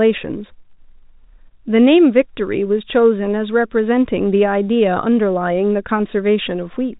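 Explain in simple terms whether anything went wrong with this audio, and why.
Nothing stood out on listening; the speech has the narrow, telephone-like sound of ordinary phone-line coding, which is expected for this kind of recording.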